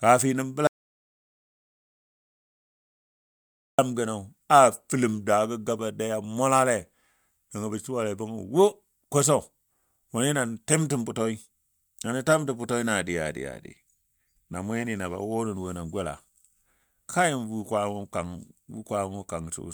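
At 0.67 s the input feed was likely lost, perhaps through a disconnected device, a failed link or a mute, while the recorder kept writing silence, so the clip has an audio dropout to silence. The speech cuts off abruptly and returns at 3.78 s, leaving a gap of about 3.1 s of dead digital silence with no room tone at all. Whatever was spoken in that stretch is missing from the recording.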